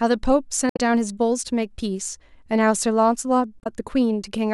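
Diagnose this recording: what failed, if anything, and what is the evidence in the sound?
Damaged data in a compressed stream at 0.69–0.79 s and 3.60–3.67 s, a codec-stage fault: corrupt frames make the decoder lose sync and search for the next frame header, leaving brief disruptions.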